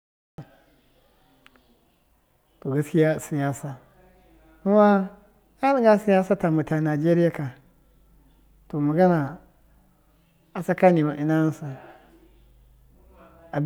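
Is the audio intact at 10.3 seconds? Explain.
Yes, the speech at 10.3 seconds is intact, with no audible fault at that moment.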